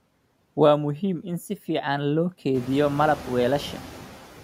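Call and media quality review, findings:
Noise suppressor artifacts, whole clip: background drops about 7 dB in the gaps, then comes back up under the speech. The suppressor is cutting bands it takes for steady noise, frame by frame. The room noise jumps about 16 dB around 2.5 s.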